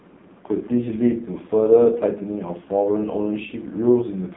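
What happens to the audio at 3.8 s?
At 3.8 s the AMR narrowband mobile codec is still audible, as it is throughout: a 150 Hz to 3.7 kHz band, nothing above 3.8 kHz, and a heavily buzzy, synthetic texture that points to its lowest bitrate mode. That buzz sets it apart from a plain telephone band filter.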